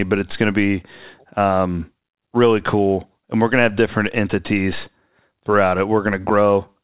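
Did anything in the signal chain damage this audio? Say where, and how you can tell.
No, nothing in the signal chain has damaged this speech. It went through a WebRTC call path whose band stops at 4 kHz, which fits narrowband G.711 mu-law coding at around 64 kbps, and that limit comes from the codec working as designed.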